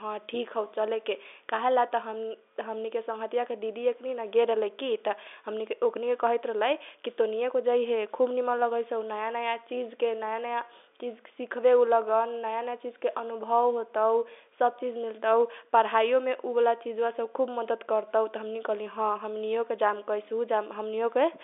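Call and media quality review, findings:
No faults found; speech carried in the normal G.711 telephone band, about 300 Hz to 3.6 kHz, with nothing above 3.8 kHz, as expected for the line.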